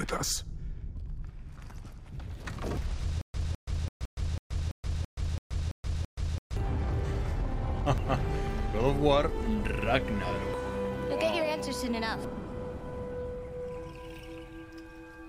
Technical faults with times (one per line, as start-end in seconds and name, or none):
2.77 compressed frames skipped
3.21-6.57 stutter with silent gaps
4.05 compressed frames skipped
7.98 compressed frames skipped
10.54 compressed frames skipped
12.24 compressed frames skipped